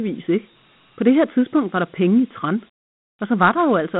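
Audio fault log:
throughout, Dialogic VOX ADPCM: the speech sits in a narrow phone band, roughly 150 Hz to 3.5 kHz, with nothing at all above 3.9 kHz, so it's dull and boxy. On top of that there's a plainly audible gritty hiss riding along with the speech. That's the 4-bit ADPCM coding in OKI-style VOX, which only stores small step-by-step changes and fits a 32 kbps stream, so its quantisation noise follows the signal.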